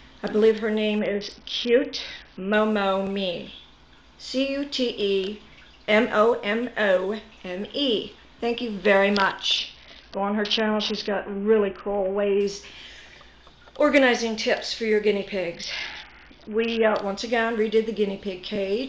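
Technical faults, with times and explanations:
0.99–2.53 s, 9.58–12.41 s and 15.54–16.95 s: Bluetooth SBC bit pool drop. In each stretch the treble suddenly dulls and a gritty, granular noise rides under the sound until the rate recovers. The phone lowered the bit pool on a congested link, which fits a bit pool cut from 31 to about 6 (roughly 55 kbps). The top sub-bands get few or no bits and the rest are coarsely quantised. On a spectrogram the upper bands go abruptly blank and speckled noise fills the lower bands, while the waveform envelope barely changes.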